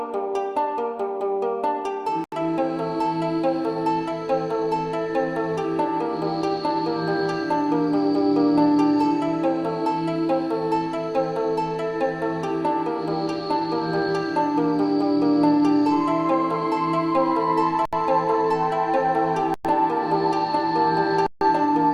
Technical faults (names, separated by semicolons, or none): Bluetooth stall